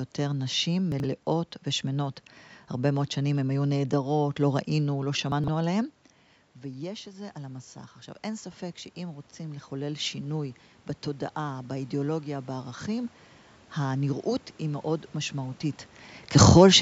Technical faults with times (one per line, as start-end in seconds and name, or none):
0.92-1.04 chunks out of order
5.32-5.48 chunks out of order
6.62-10.49 automatic gain rising